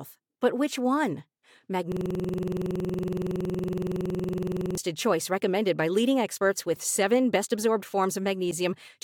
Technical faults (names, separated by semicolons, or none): system hang loop